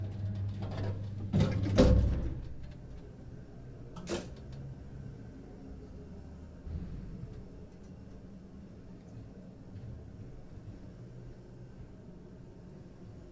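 No technical faults can be heard anywhere in the audio, and the signal stays intact and continuous throughout.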